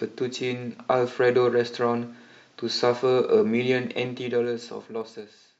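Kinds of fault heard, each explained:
Zipper noise: from 3.98 to 5.33 s the level drops about 15 dB in 2 dB steps, roughly five per second, each leaving a click, unlike a smooth fade.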